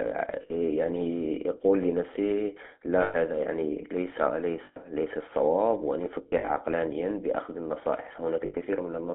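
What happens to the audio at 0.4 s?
From 0.42 to 0.51 s there are lost GSM frames. The decoder fills the roughly 80 ms gap, which fits four 20 ms frames, by repeating the last good frame's parameters. The result is a brief rough, metallic ring before the signal resumes.

The GSM full-rate codec runs through this moment. It drives a vocal-tract model with sparse regular pulses, which gives the speech a buzzy, gravelly roughness. The band is limited to roughly 250 Hz to 3.5 kHz, and the damage is plainly audible.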